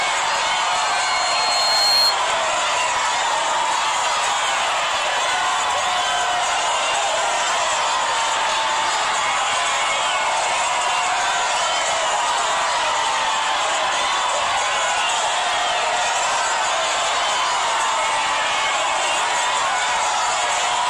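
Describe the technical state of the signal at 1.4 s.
At 1.4 s the signal is caught in a loudspeaker feedback squeal, running from 0.32 to 2.17 s. A microphone is picking up the loudspeaker it drives, and around 4.2 kHz the loop gain has passed one, so that frequency keeps feeding itself. At 1.4 s the tone is still swelling, building over roughly a second and a half into a whistle that sits about 5 dB above the underlying sound.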